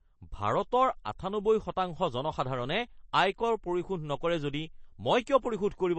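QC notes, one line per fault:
throughout, MP3 compression: the speech has no content above 8.3 kHz, and the remaining treble sounds watery and swirly, with metallic chirps on s sounds and smeared consonant attacks. The likely cause is MP3 encoding at a low bitrate, fitting roughly 32 kbps. The encoder starved of bits cuts the top band and drops weak frequency lines frame by frame. A plain low-pass filter would remove the highs cleanly, without this shifting, chirpy residue.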